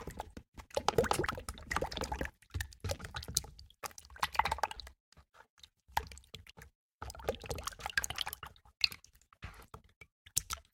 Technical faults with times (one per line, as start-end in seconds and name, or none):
1.26 audio missing between chunks
3.01 audio missing between chunks
4.76 audio missing between chunks
6.51 audio missing between chunks
8.26 audio missing between chunks